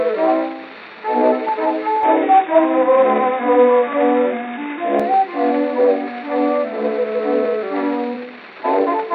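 At 2.03 s the sound abruptly turns dull and boxy. Nothing comes through above 3.8 kHz. The change happens with no gap or silence, and the overall level stays about the same. A faint new background noise appears, well below the signal. At 5.00 s the full bandwidth returns just as suddenly. The likely cause is an input switched to a poorer device, a narrower-band microphone with its own tone and noise.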